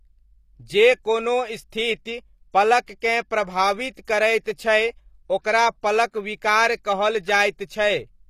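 Right from the start, the speech has plainly audible damage of the kind HE-AAC compression leaves, and that's the likely cause. The treble is rebuilt by copying lower bands upward rather than coded directly, so the sibilants come out gritty and metallic. Nothing sits above 15 kHz, and the overall sound fits a bitrate around 24 kbps. At 1.70 s there's a pre-echo: a short hiss of about 18 ms leading into an attack. The codec spread its noise across the whole block, including the quiet moment just before the onset, so the attack sounds softened and smeared.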